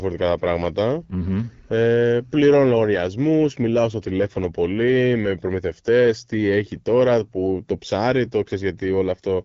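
From start to finish the speech carries the signature of the AMR wideband (HD Voice) codec. Nothing reaches above about 7.5 kHz, and the damage is plainly audible: voicing sounds rough and raspy, as the pulse-based vocal tract model has too few bits to follow the waveform closely. This degradation fits one of the codec's two lowest modes, most likely 8.85 kbit/s, and the top band sounds like shaped noise rather than true detail.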